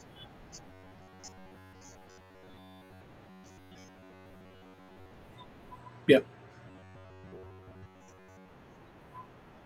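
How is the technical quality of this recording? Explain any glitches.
Poor: the speech turns robotic three times, from 0.68 to 3.02 s, 3.28 to 5.11 s and 6.68 to 8.49 s. This is robotic sound from repeated short buffers, likely from audio arriving too slowly, so roughly 10.7 ms snippets loop over most of the skipped material. The result is a metallic buzz fixed at 93.8 Hz that follows the words only roughly. Unlike plain dropouts, the sound never goes silent.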